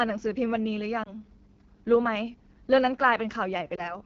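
Speech sounds rough and raspy throughout, which fits the AMR wideband (HD Voice) codec at about 8.85 kbit/s, one of its lowest rates, where the vocal tract model cannot follow the voice cleanly. Brief dips and warbles at 1.03 to 1.09 s and 3.76 to 3.99 s each point to a single lost AMR speech frame of about 20 ms. The decoder bridges the gap by reusing the previous pitch and vocal tract settings at falling gain.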